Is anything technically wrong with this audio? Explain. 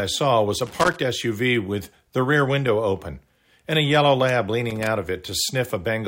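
Yes, there's loose connector crackle in two spots in this speech clip: from 0.66 to 0.96 s, and again from 4.70 to 4.87 s. It sounds like an irregular burst of scratchy crackle. What's happening is a worn or dirty contact somewhere in the cable run that keeps making and breaking as it shifts, so the signal gets chopped on and off rapidly, with pops wherever there's DC on the line.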